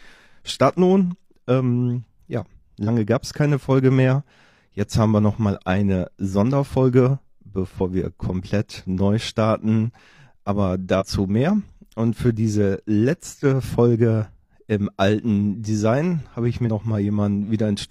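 Damaged data in a compressed stream makes the decoder lose sync and hunt for the next frame, producing brief glitches at 2.84–2.89, 7.76–7.81, 10.96–11.03 and 16.63–16.69 s.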